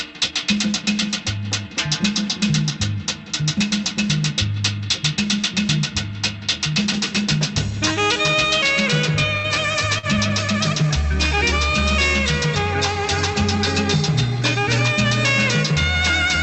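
At 9.37 s and again at 9.98 s, the sound briefly freezes and holds with a faint buzz or dip, for about 70 ms and then 47 ms. These are short stalls from a late packet: the jitter buffer ran dry, the last sound was stretched until the packet arrived, and playback resumed where it had stopped. Through the Opus call path, high frequencies stop at about 8 kHz.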